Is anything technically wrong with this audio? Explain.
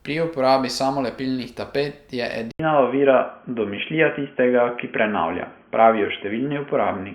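Yes, there's a problem with the input. Right after "uporabi samolepilnih tapet je", at about 2.51 s, the speech drops out for around 80 ms and comes back through what sounds like a different, poorer device for the rest of the clip. It's likely the input switched to a poorer device, such as a headset call profile. Nothing comes through above 3.3 kHz, so the speech turns dull and boxy. The level also shifts by roughly 5 dB, and a new, faint noise floor sits about 45 dB down.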